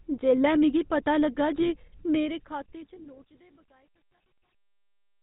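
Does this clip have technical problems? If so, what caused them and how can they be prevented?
Yes. GSM full-rate codec, throughout the clip: the speech has the buzzy, gravelly roughness of the original GSM coder, which fits its 13 kbps full-rate mode. That codec models the vocal tract as a filter and excites it with a sparse, regularly spaced pulse train built from a decimated residual, so the fine detail of the voice is replaced by a coarse, rasping texture, and nothing above 4 kHz survives, leaving the sound dull and narrow. To prevent it, capture or route the call through a wideband codec such as AMR-WB or EVS, or record the speech locally rather than over the GSM path.

GSM bit errors, from 1.55 to 1.71 s, right after "जेल्लै मिगी पता लग्गा": the voice breaks into a brief gargling squawk. This points to a weak radio link letting corrupted bits reach the decoder. When the bits carrying the filter coefficients, pitch lag or gain are wrong, each affected frame is rebuilt with a distorted spectral shape or an inflated level, which produces the pops and warbling. 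To prevent it, keep the handset in good signal coverage or use a link with stronger error protection and bad-frame concealment.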